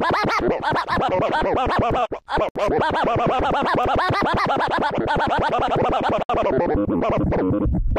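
Separately encoded pieces were joined without trimming the encoder delay and final-frame padding, causing a gap at a join of encoded pieces at 2.49 to 2.56 s and again at 6.23 to 6.30 s. Each time the continuous sound drops out for about 68 ms, with smeared edges, then resumes where it stopped.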